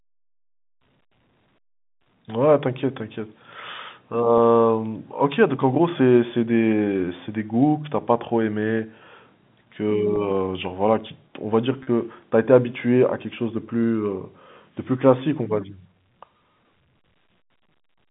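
Packet loss with pitch repetition occurs at 2.04–2.06 s, 4.38 s, 10.16 s and 11.83–11.87 s. The receiver repeats the last pitch period across 10–40 ms gaps, giving briefly held, buzzy speech within the 150 Hz–3.6 kHz G.711 telephone band.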